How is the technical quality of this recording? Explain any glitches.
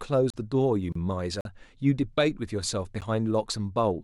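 The speech is interrupted by four short dropouts, so the technical quality isn't clean.

Three of them are a block of digital silence, at 0.30 to 0.34 s (about 35 ms), 1.41 to 1.45 s (about 43 ms) and 3.01 s (about 12 ms, which fits a 512-sample buffer). Output probably wasn't supplied in time and got zeroed, so each one drops hard to nothing and back. The longer ones read as little holes, and the last is more of a tick.

The other one is a gap at a join of encoded pieces, at 0.92 to 0.95 s, roughly 31 ms. Two separately encoded chunks were spliced without trimming the encoder's start delay and end padding, so a brief silence opens with smeared edges before the speech picks up right where it stopped.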